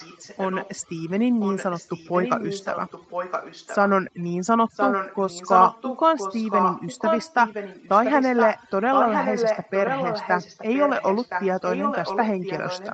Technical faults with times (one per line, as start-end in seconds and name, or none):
0.00-12.93 overdone noise removal
0.00-1.11 echo leak
1.40-3.90 echo leak
4.72-12.93 echo leak
12.07-12.09 lost packet rebuilt from error correction